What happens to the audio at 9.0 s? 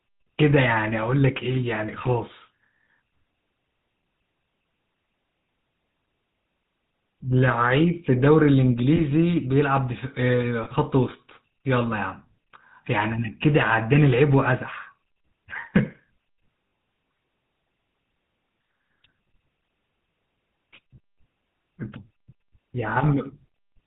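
At 9.0 s the speech breaks up briefly because of lost GSM frames, between 8.96 and 9.01 s. The gap is short enough that a single missing 20 ms frame would explain it. The decoder fills the hole by repeating the parameters of the last good frame, so the sound hangs on as a short, rough, metallic ring. On a spectrogram the harmonic pattern freezes into flat horizontal bands for that stretch. The waveform shows a small block of repeated cycles.

This moment also carries the damage from the GSM full-rate codec that runs through the whole clip. It models the vocal tract and drives it with a sparse pulse excitation that keeps one sample in three, which makes the audio buzzy and gravelly, at a quality that fits a 13 kbps coder. A spectrogram shows nothing above 4 kHz, with a hard ceiling at that frequency. The waveform looks coarse and pulse-driven.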